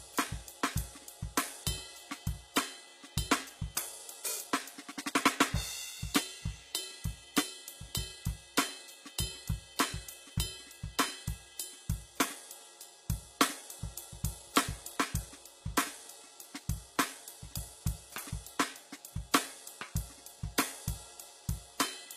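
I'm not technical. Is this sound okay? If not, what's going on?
No. The music was most likely squeezed through HE-AAC compression, which keeps the lower sounds and fakes the treble by copying lower parts upward. Throughout the clip, the treble sounds gritty and metallic, and nothing reaches above roughly 15 kHz.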